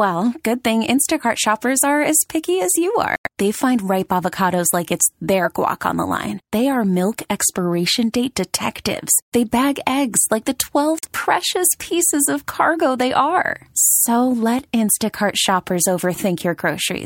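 At 3.16 s, after "as picky as you", the speech drops abruptly into silence for about 0.12 s, and again at 10.99 s for about 0.07 s, between "bag eggs like the" and "precious pieces of cargo". Each is a corrupt frame muted: the decoder rejected damaged compressed frames and the player substituted silence, keeping the timing intact.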